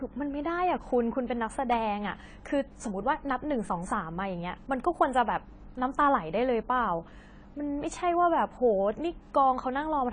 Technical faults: AAC compression

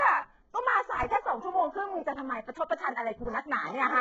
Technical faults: HE-AAC compression

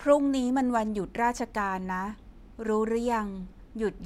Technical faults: none

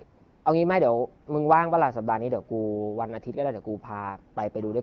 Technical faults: AMR comfort noise

